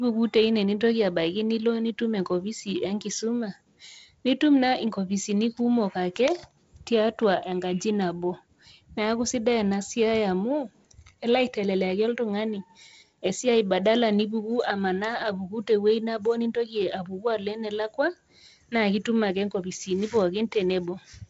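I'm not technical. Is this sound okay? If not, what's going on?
Yes, nothing in this recording stood out as a problem on listening.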